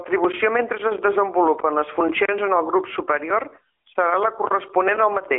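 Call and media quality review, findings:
AMR narrowband mobile codec throughout: band-limited, buzzy synthetic speech. Spectrogram shows 300 Hz–3.4 kHz, empty above 3.6 kHz. Plainly audible damage fits AMR-NB's 10.2 kbps mode.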